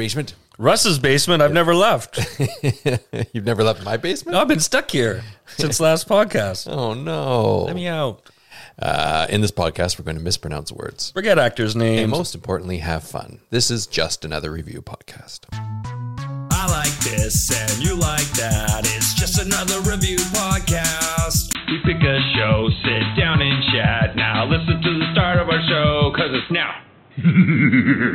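Right around 21.53 s there's a brief gap, about 20 ms, and from there to the end the audio goes dull and boxy. Everything above roughly 4.1 kHz is gone, the level shifts by something like 5 dB, and a new noise floor shows up, sitting maybe 30 dB under the signal. That combination most likely comes from the input switching to a poorer device mid-recording, such as a different mic or a headset's call profile.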